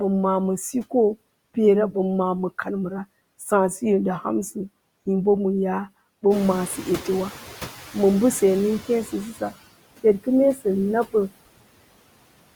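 The whole clip has noise suppressor artifacts: background noise is pulled down by about 20 dB frame by frame, so it sinks between the words and rises under them. From 6.3 to 9.26 s there's the noise suppressor catching up. The room noise jumps by about 14 dB near 6.5 s, and the estimate takes nearly 3 s to follow, so the noise comes through louder before sinking again. Around 10.55 to 10.66 s there's speech cut by the noise suppressor: roughly a tenth of a second gets mistaken for noise and dips by up to about 14 dB, sounding swallowed.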